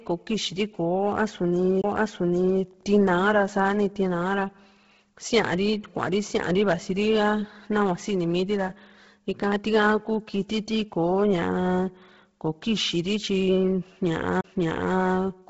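Across the whole recording the speech has a breathy, grainy edge, with a hiss-like texture where the upper harmonics should be, and nothing at all above 7.7 kHz. The damage is heavy. This is likely Bluetooth LC3 compression: the LE Audio transform codec has discarded much of the upper spectrum and filled it with noise, a pattern that fits a low bitrate around 16 kbps and 10 ms frames.

From 14.41 to 14.44 s there is a brief drop-out of roughly 30 ms, after which the audio resumes from a different point rather than continuing smoothly. This is a CD skip: the player's laser lost its track and jumped to another turn of the disc's spiral, muting for a moment before carrying on. The audio lurches instead of pausing cleanly.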